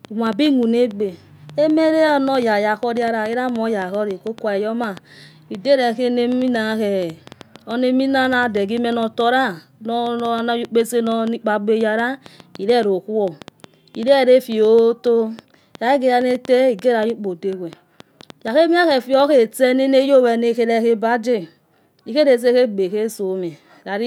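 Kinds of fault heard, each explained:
Train of clicks: about five uneven ticks a second from 0.05 to 19.2 s, poking a little above the speech, likely interference or a faulty connection.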